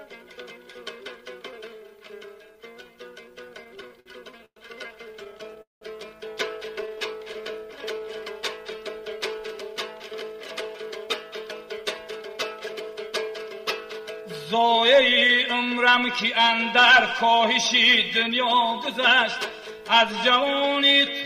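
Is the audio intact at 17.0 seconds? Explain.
No. A jitter buffer speed-up runs from 11.08 to 20.71 s: the receiver, holding more buffered audio than it wanted, repeatedly cut out short pitch-period pieces, about a fifth of a second in total. The sound plays at 102% speed, pitch unchanged.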